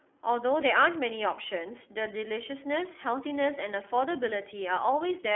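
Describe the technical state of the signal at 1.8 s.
At 1.8 s the speech carries iLBC codec coding, present across the whole clip. Nothing passes above 3.6 kHz, and each frame's excitation is coded independently, which fits 30 ms frames at 13.33 kbps. The result is a plainly audible rough, synthetic texture.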